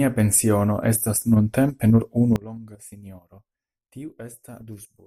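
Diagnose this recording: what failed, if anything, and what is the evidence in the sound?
Sudden gain jump at 2.36 s: speech and background noise drop together by about 22 dB to the end, likely an unramped digital gain change.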